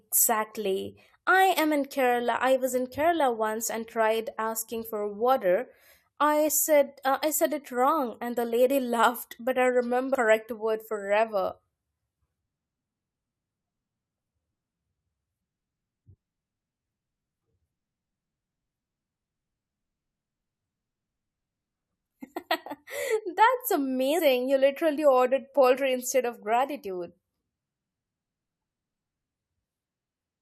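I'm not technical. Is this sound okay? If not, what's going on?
No, not quite. There are two tiny glitches in the speech, one at 10.14 seconds and another from 24.18 to 24.20 seconds, each a quick blip or chirp. That's damaged data in a compressed stream: a few bytes of the compressed file got spoiled, so the player couldn't make sense of that bit, lost its place for a split second, and hunted for the next good chunk before carrying on.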